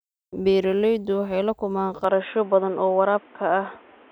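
From 2.04 s, right after "waxay la kulmaan", the speech abruptly turns dull and boxy, with nothing above 3.7 kHz, a new noise floor roughly 30 dB down, and no gap or level jump. The likely cause is an input switched to a poorer device.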